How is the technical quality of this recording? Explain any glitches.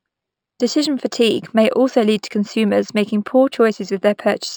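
The recording has one fault running the whole way through: imaging from linear upsampling. The top end sounds dulled, and a faint mirrored copy of the band sits from 6 to 12 kHz, roughly 25 dB down, which fits audio at 12 kHz raised to 48 kHz by drawing straight lines between samples. That weak interpolation leaves a light metallic shimmer on the sibilants of the speech.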